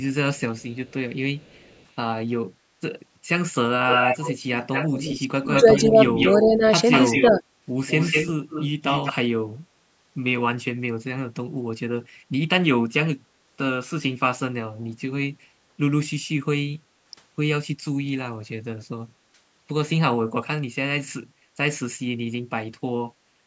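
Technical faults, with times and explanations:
0.38–1.83 s and 3.88–9.13 s, echo leak: a delayed copy of the speech returns, first very faint at a 355 ms delay, then much stronger, roughly 10 dB below the talker, at 197 ms. This is likely a far-end loudspeaker echo the canceller failed to remove. It sounds like a distinct repeat, not reverb's smooth tail.
5.47–6.63 s and 7.22–7.42 s, speech suppressed in double talk: while the returning echo overlaps, the talker's own speech dips, by roughly 10 dB over about half a second in the first stretch and roughly 5 dB briefly in the second. This is likely the canceller turning everything down when it cannot separate both sides. The speech itself weakens, not just the room.
16.79–16.94 s, background gated by the echo canceller: the room sound drops by about 13 dB for about 150 ms, then returns. The likely cause is the canceller clamping the microphone during loudspeaker playback. 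Only the background dips here, with no speech cut, which separates it from double-talk suppression.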